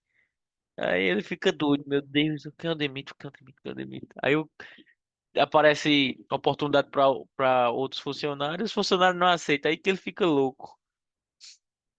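No technical faults can be heard in this speech recording.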